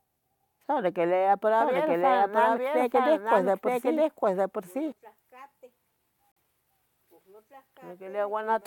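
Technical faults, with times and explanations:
1.60 to 4.92 s, doubled audio track: From 1.60 s a second full-band copy of the speech runs underneath, lagging roughly a second behind and just about as loud as the original, so the two talk over each other. There's no reverb tail or room colour on the copy, and it cuts in and drops out abruptly at 4.92 s. That's most likely the signal being picked up a second time through a slower route, or an edit leaving two misaligned copies stacked.
6.32 to 6.38 s, corrupt frame muted: Here there's a sharp-edged dropout of about 58 ms where the audio simply goes silent and then picks up again right on time. That length fits a short run of compressed frames, around three of them, that arrived damaged and were rejected by the decoder. The player filled the gap with silence rather than attempting to conceal it, which is why the hole starts so suddenly and nothing after it shifts.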